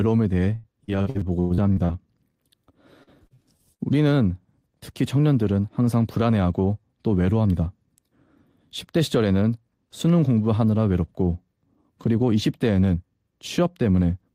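From 0.55 to 1.97 s and again from 3.03 to 3.82 s, repeated packet loss produces a choppy sound with pieces missing. Ten and then five gaps, the longest 102 ms, are patched by stretching the last sound. Unlike a single dropout, the holes recur quickly. From 7.32 to 8.05 s, a jitter buffer speed-up trims about a tenth of a second of pitch periods, so the speech runs 111% fast and sounds hurried while the pitch stays the same, which sets it apart from a sped-up playback.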